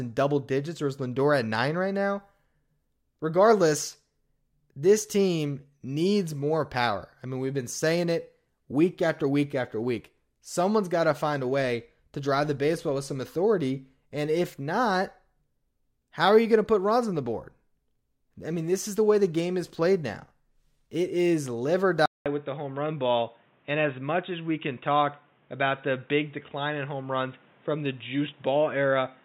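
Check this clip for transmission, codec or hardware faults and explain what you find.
There's one fault here, an input switched to a poorer device, most likely. Right after "is live or", at 22.06 s, the speech drops out for 0.2 s, and from then to the end at 29.2 s it sounds boxy and dull. Nothing gets through above 3.8 kHz, which points to a narrower-band mic or headset call profile taking over. The loudness hardly changes, but a new noise floor comes in at about 35 dB under the speech.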